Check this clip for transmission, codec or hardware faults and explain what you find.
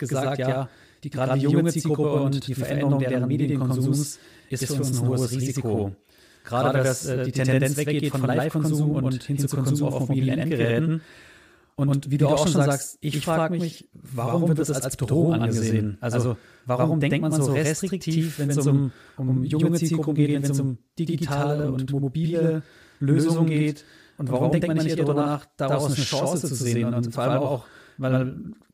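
One fault runs through the whole speech clip: a channel delay causing doubling. One channel arrives about 93 ms late, which fits a 4096-sample buffer, and both are summed to mono. Every syllable is followed by an equally loud copy, heard as a distinct slap echo.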